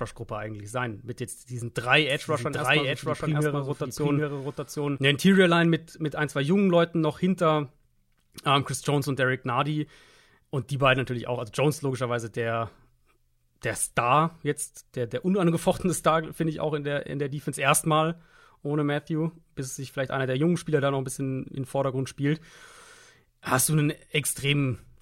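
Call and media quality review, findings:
Doubled audio track, 2.10–4.98 s. Speech repeated about 0.7 s late at roughly equal level, full band. Likely a second, slower capture path mixed in. Not acoustic echo: no decay, no room colour, copy starts and stops abruptly.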